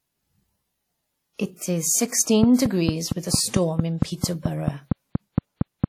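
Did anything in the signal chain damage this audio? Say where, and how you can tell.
Yes, at the codec stage first. The whole clip is washy and ringing, with hiss that swells and falls along with the speech, and nothing comes through above 18.5 kHz. The codec damage is plainly audible. That's most likely WMA compression, with quantisation noise smeared across long transform blocks and weak spectral detail zeroed out. The amount of damage fits a bitrate around 48 kbps.

The second problem is a train of clicks from 2.43 s to 5.85 s. It's a regular ticking at about 4.4 per second, around fifteen clicks in all, each roughly 20 dB above the speech. They all have much the same shape and keep coming through pauses as well, so they're sitting on top of the audio rather than coming from it. That points to the analogue side, likely interference from nearby equipment or a faulty connection or power supply feeding pulses into the chain.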